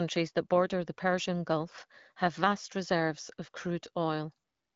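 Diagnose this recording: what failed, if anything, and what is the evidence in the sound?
Nothing failed; the speech carries no audible fault.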